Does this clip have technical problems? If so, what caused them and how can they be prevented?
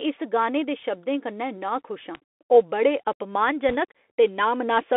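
Yes. The speech has passed through a Bluetooth CVSD headset codec for its whole length. The band runs only from about 250 Hz to 3.5 kHz. The one-bit delta coding, which fits a 64 kbps link, cannot follow fast loud high sounds. S sounds turn scratchy, and a grainy hiss sits underneath. To prevent this, record on a wideband path such as a wired microphone or a headset using a wideband speech codec.

At 2.15 s there is a bit error spike, between "शब्दें कन्नै नाखुश आं" and "आं ओह् बड़े". A flipped bit pushed a few samples, which fits a run of three, far off their true value. It is heard as one sharp broadband tick. To prevent this, use error-checked storage and links.

From 3.69 to 3.76 s there are bit errors on a Bluetooth voice link. Each CVSD bit carries little weight, so the damage is a brief rushing crackle with no loud clicks. It fits about 14 frames hit at an error rate of roughly one to two percent. 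To prevent this, keep the headset close to the host and away from radio interference.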